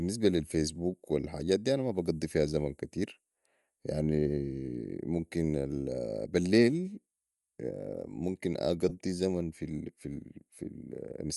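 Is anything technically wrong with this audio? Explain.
Yes. Throughout the speech there is a breathy, grainy edge to the upper frequencies, most likely from Bluetooth LC3 compression. The codec's transform frames, which fit 10 ms, zero much of the top band and refill it with noise, a plainly audible loss consistent with around 48 kbps.

Between 8.89 and 8.93 s there are lost LE Audio frames. The LC3 decoder covered the dropout, which fits two missing frames, by repeating the previous spectrum with random signs. This turns about 20 ms of speech into a brief noisy smear.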